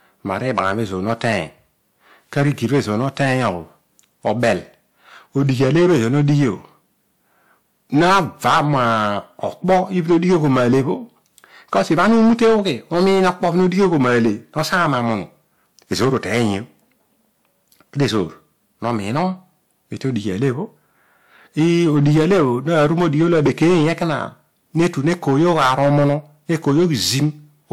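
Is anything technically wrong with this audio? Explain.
Yes. Hard clipping runs through the whole speech clip: the signal is driven about 15 dB past what the stage can pass, so roughly one sample in twenty is sheared flat at the ceiling. Those flat tops add high harmonics, giving harsh fuzz on every loud syllable rather than the occasional isolated peak crackle of milder overload.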